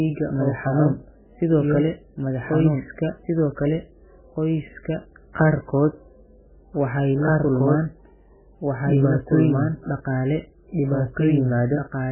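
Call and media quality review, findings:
Doubled audio track, throughout: second full-band copy of the speech at about equal level, trailing by about two seconds, with no decay or room colour. Likely a slower capture path, or an edit holding two out-of-step copies, mixed in alongside the original.

MP3 compression, throughout: heavy damage, nothing above 3 kHz, watery, swirly texture, smeared attacks, metallic chirps on s sounds. Likely a starved MP3 encode at a very low bitrate, cutting the treble and zeroing weak frequency lines from frame to frame.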